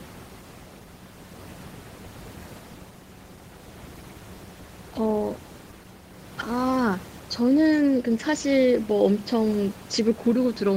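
No technical faults are audible.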